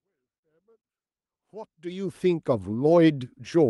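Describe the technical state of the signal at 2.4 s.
At 2.4 s the speech signal is intact, with the smooth fade-in arriving at full level cleanly and no click or hard edge.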